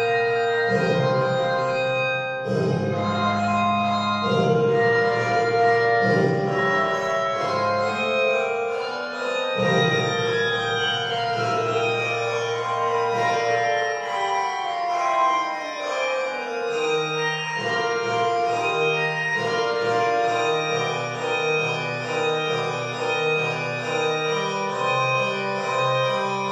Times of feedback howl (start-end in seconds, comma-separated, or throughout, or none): none